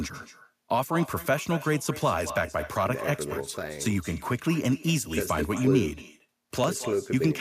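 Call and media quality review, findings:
Echo with no canceller: far-end speaker output reaches its microphone and returns unremoved; each phrase shadowed roughly a fifth of a second later by a thinner copy, about 16 dB down.

Periodic USB or driver dropouts: bus or driver stalls every 2.0 s from 0.67 s to 6.64 s, around four events; roughly a millisecond skipped each time, heard as regular ticks.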